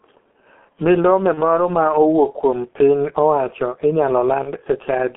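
From start to finish the speech is muffled and hoarse, with smeared consonants and nothing above about 3.4 kHz or below 200 Hz. This is G.723.1 codec damage, heavy here: coarse 30 ms frames and a slowly updated voice model, consistent with a bitrate around 6.3 kbit/s.

At 1.34 to 1.42 s and again at 4.43 to 4.52 s, the voice briefly turns into a buzzy tone or coloured noise that fades, and stays weak for a moment afterwards. This is VoIP packet loss concealed by the speech codec. Each gap fits a single lost 30 ms frame, which the decoder filled by extrapolating its last pitch and filter.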